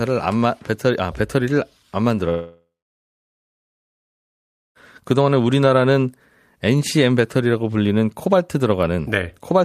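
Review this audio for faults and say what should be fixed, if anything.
From 2.29 s to 4.78 s a long network dropout cuts the speech: the last sound is held as a fading buzz, then about 2.1 s of near-silence, and roughly 2.5 s of speech is lost, likely from lost packets. A spectrogram shows a smeared, decaying band then a blank gap, while the waveform flattens. Forward error correction or a deeper jitter buffer would help prevent it.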